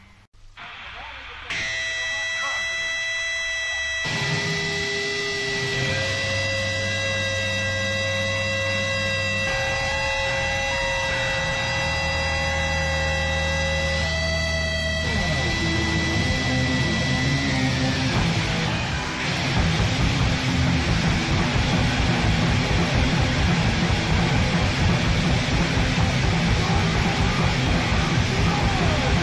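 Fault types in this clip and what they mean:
Nothing stands out here; there's no glitch, dropout or other problem to point to anywhere in the clip.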